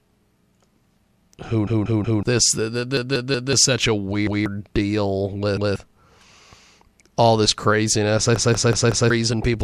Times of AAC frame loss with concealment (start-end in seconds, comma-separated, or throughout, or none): none